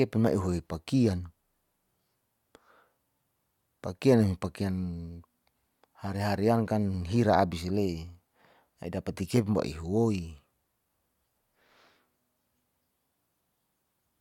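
Nothing technical goes wrong anywhere in this speech recording, so there's no fault to point to.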